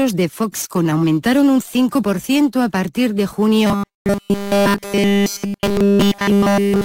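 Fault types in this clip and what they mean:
Robotic sound from repeated short buffers: from 3.67 s to 6.84 s the sound turns into a rigid, metallic buzz at 200 Hz. The likely cause is fresh audio arriving too seldom, so a 5 ms slice was replayed back to back while the real material was skipped, across essentially the whole span. A spectrogram shows flat, evenly spaced harmonic lines at multiples of 200 Hz. The waveform shows one short cycle copied end to end.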